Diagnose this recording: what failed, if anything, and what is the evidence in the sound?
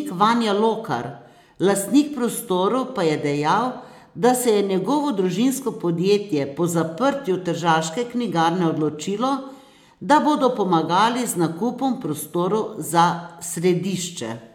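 Nothing failed; no fault is audible at any stage.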